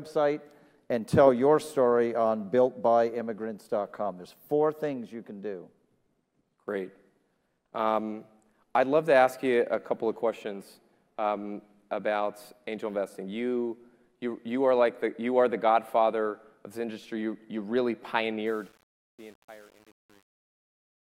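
From 18.47 s to the end at 21.15 s, the fade-out turns gritty and grainy. From 18.58 s onward the grit is at its worst. This is truncation distortion on a fade. The gain stage cuts off low-order bits with no dither, which fits a stage keeping about 8 bits. As the fade nears the smallest step, the waveform collapses into a few coarse square steps.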